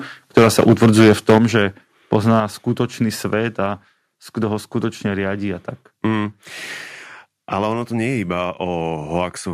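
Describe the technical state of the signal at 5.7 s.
At 5.7 s the speech signal is intact, with no fault present at that moment.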